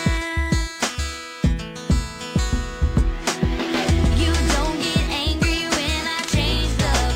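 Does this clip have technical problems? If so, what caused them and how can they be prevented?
No, no technical problems are audible anywhere here.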